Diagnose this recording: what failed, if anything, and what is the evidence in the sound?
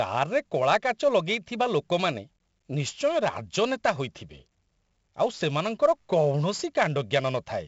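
The codec stage is the culprit here: this speech has been through 4-bit ADPCM compression the whole way. There's a gritty hiss riding on every louder syllable and rising and falling with the level, plus roughness on the sharp onsets where the adaptive step can't grow fast enough to keep up. The damage is heavy. Nothing comes through above 7.7 kHz, which fits a low sample rate, and the overall data rate fits a 64 kbps stream.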